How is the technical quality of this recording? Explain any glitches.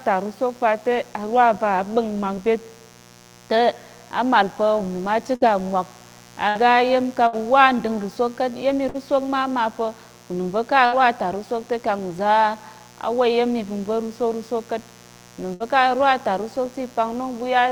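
The recording is compromised by a constant buzz and by six short dropouts.

Mains buzz runs through the whole clip: a raspy 60 Hz buzz sitting roughly 25 dB below the speech. Switching spikes twice per mains cycle spread harmonics into the kilohertz range, which makes it sound gritty rather than like a smooth, pure hum.

A burst of packet loss occurs at 5.35, 6.49, 7.27, 8.89, 10.86 and 15.54 s. Each lasts about 83 to 92 ms. The receiver stretched the last sound for 53 to 62 ms, fading it into a held buzz or hiss, and then jumped ahead, so about 60 ms of speech is missing each time. That skip is what sets it apart from a simple mute or a click.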